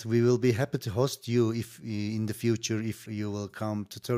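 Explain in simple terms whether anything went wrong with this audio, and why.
Nothing went wrong that I could hear; listening to the speech, no moment stood out as faulty or out of place.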